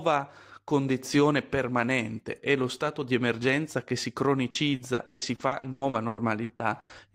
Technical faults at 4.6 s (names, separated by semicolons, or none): repeated packet loss (robotic sound)